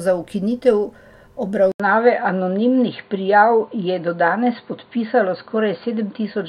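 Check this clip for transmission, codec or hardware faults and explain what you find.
One fault is audible. From 1.72 s to the end, after an 80 ms silence, the speech turns dull and boxy. Nothing is left above 4.6 kHz. A faint new noise floor appears, far below the speech. Loudness stays about the same. The likely cause is an input switched to a poorer device, one with a narrower band and its own noise.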